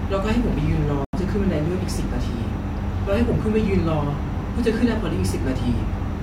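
At 1.05 s the speech cuts out in a digital broadcast dropout lasting until 1.18 s. Bad or missing frames, likely a couple, made the receiver mute, so that stretch of programme is simply gone. The waveform drops flat and the spectrogram shows a clean, full-band vertical gap.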